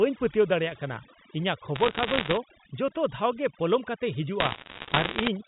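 Right from the start there's overdone noise removal: the reducer was pushed too hard, so the background drops and breaks up into twinkling specks. Then, from 1.76 to 2.37 s and again from 4.40 to 5.28 s, you get bit errors on a digital phone line, which sound like a spray of sharp ticks over the speech. Single flipped bits on the G.711 A-law line are corrupting individual samples, at a rate of around one percent in the first burst and somewhat higher in the second.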